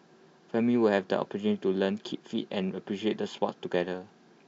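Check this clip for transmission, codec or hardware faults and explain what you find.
Nothing stood out on listening to this speech recording, and no problems were heard anywhere in it.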